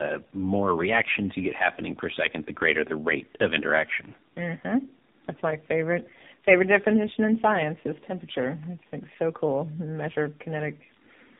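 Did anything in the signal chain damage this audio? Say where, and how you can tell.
Yes. The speech sounds rough, muffled and warbly throughout, with nothing above 3.7 kHz. That points to tandem speech coding at the codec stage. The call was decoded and re-encoded at each link, apparently through three narrowband coders ending in AMR-NB, each degrading the last one's output.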